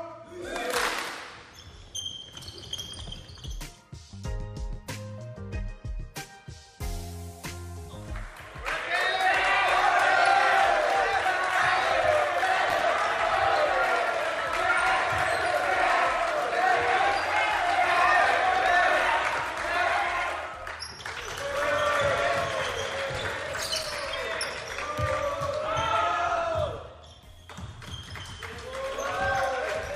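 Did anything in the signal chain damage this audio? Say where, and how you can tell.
Yes. A worn or dirty contact in the analogue wiring made and broke intermittently, producing loose connector crackle from 12.70 to 12.84 s and again from 23.62 to 24.05 s. Each break chops the signal into irregular scratchy bursts.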